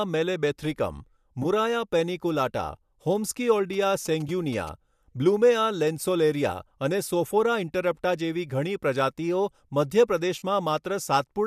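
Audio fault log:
1.43–1.46, 4.28 and 10.39–10.43 s: AAC frame loss with concealment. Two, one and three frames go missing (about 20, 10 and 30 ms), the last just after "જેવી ઘણી પ્રજાતિઓ મધ્ય". Each time the decoder rebuilds the gap from the last good spectrum with randomised phase, so the sound smears into a brief noisy, phasey blur. On a spectrogram the harmonic lines break into a short vertical smudge of diffuse energy. The waveform shows a slightly flattened, irregular patch.
3.73–4.69 s: GSM signalling bursts. A nearby 2G phone is signalling, and its radio bursts are rectified in the audio circuit. The result is a galloping tick-and-buzz pattern at a 217 Hz repetition rate, sitting about 20 dB below the signal. It can be heard through the AAC-ELD low-delay compression that likely shapes the clip. A spectrogram shows a comb of evenly spaced harmonics of 217 Hz in clustered groups. The waveform shows sharp periodic spikes bunched into bursts.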